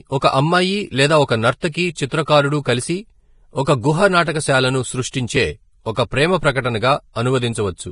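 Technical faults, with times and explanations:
Throughout, low-bitrate audio saved at a high bitrate: the speech was likely squeezed through a low-bitrate encoder, one pointing to roughly 30 kbit/s, then re-saved as high-bitrate MP3, which cannot restore what was discarded, so nothing sounds above 10.5 kHz and the first encoding's artefacts remain.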